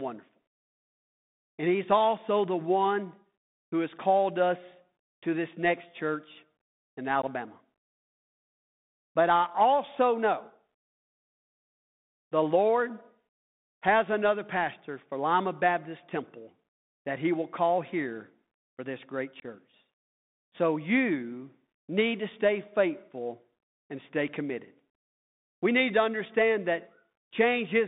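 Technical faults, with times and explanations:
Throughout: Bluetooth CVSD headset codec. The speech is confined to a narrow phone band, roughly 150 Hz to 3.7 kHz. Nothing above 4 kHz survives, so it sounds thin and boxy. The damage is plainly audible. Each sample is coded as a single up-or-down bit, with a step size that adapts. Loud, bright sounds outrun that step and distort. S sounds turn scratchy. A granular hiss sits under the speech. This fits a 64 kbit/s CVSD link.
7.22–7.24 s and 19.40–19.46 s: unconcealed Bluetooth headset packet loss. The first gap comes just after "this next church in" and lasts about 15 ms. The second follows "here for this great" and lasts about 22.5 ms. Audio packets between headset and phone went missing. Nothing filled the holes, so the sound simply drops out. The edges are abrupt. The lengths suggest two or three short packets lost each time.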